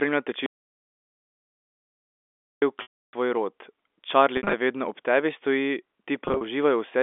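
A speech recording carried over a G.711 telephone-band line (nothing above roughly 3.5 kHz) is interrupted by an audio dropout to silence from 0.46 s to 2.62 s. For about 2.16 s the signal falls to silence, with no room tone or line noise. On a waveform this is a flat line, and on a spectrogram it is a solid black block across all frequencies. The abrupt edges at both ends suggest the input was likely lost, through a disconnected source or a mute, while recording continued. The clip also has packet loss with pitch repetition. The longest episode runs from 2.82 s to 3.13 s, about 310 ms, just before "tvoj rod". There the last voiced cycle is looped into a buzzy, held tone that fades to silence before speech cross-fades back in. Shorter scattered losses occur at 4.37–4.53 s (120 ms lost within 160 ms, longest run 60 ms, before "vedno ob tebi") and at 6.25–6.41 s (110 ms within 160 ms, longest run 40 ms). 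These sound like slightly held, buzzy notes. Their sizes fit 10 ms packets. On a spectrogram they appear as flat, smeared horizontal harmonic stripes, and on a waveform as identical repeating periods that taper off.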